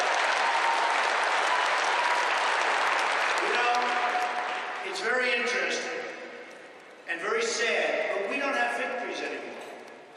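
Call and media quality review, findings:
No faults found in this clip. Nothing heard points to a problem in any component of the capture, transport or playback chain.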